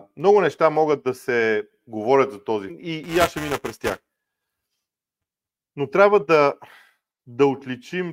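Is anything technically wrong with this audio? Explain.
Yes, there are two faults. At 2.69 to 2.74 s the speech jumps ahead with a small blip, most likely a stream segment skipped. The jump itself, not a silent gap, sets it apart from a dropout. From 3.04 to 5.62 s, buffer tearing produces a steady 375 Hz robotic buzz, which fits a 128-sample buffer. In every period, a small slice of audio a few milliseconds old is hard-joined in. Unlike a noisy hum, the buzz is present only while speech sounds.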